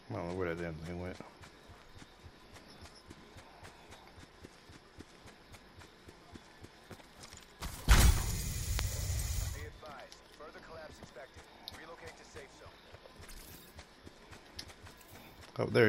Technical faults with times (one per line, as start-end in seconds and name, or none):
none